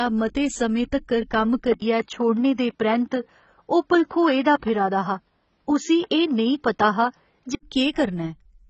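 Heavy AAC compression runs throughout, likely AAC-LC at a low rate, which fits around 16 kbps. Nothing reaches above 8.1 kHz. The speech sounds dull and smeared.

At 1.74 s an 80 ms silence gaps the sound. The input has likely switched to a poorer device. Nothing now reaches above 7.1 kHz. The level holds steady, with new background noise far below the speech. The original device returns at 7.63 s.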